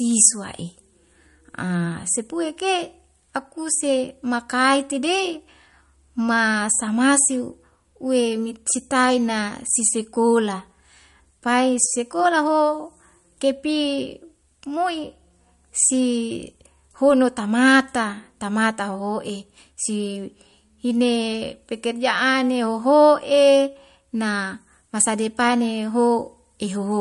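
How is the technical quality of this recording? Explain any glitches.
Technical quality is limited by compression damage that runs through the whole recording. The speech has no content above 11.2 kHz, and the damage is plainly audible: sibilants take on a watery, swirling texture with metallic chirps, and consonant attacks sound smeared. The likely cause is MP3 compression at a low bitrate, consistent with about 48 kbps. Short of bits, the encoder cuts off the treble and discards weak frequency components, which flicker on and off between frames.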